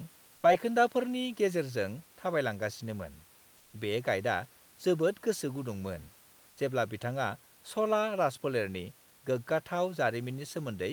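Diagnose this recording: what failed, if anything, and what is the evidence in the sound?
Comfort noise in place of the background at 0.35–0.43 s, before "बायखोन्दाफोरनि गेजेरजों", and 6.49–6.57 s, before "जेब्ला बिथाङा": each 80 ms pause holds flat, featureless noise about 1 dB below the room noise, likely the codec's discontinuous transmission filling silence with synthetic noise.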